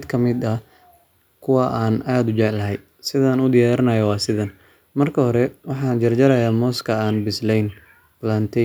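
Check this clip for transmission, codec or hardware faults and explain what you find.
Nothing here points to a transmission, codec or hardware problem; the speech comes across steady and intact the whole way, with no faults to report.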